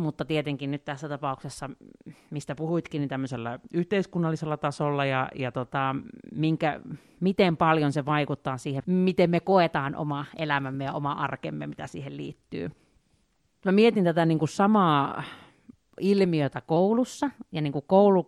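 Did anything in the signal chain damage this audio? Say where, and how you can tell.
Yes. From 3.3 to 5.65 s the speech slows about 6% and drops roughly a semitone, then snaps back. From 9.52 to 11.27 s and 16.76 to 17.65 s it speeds up 6% and rises a semitone. That's a drift correction step, likely from buffer-level clock matching retuning playback rate.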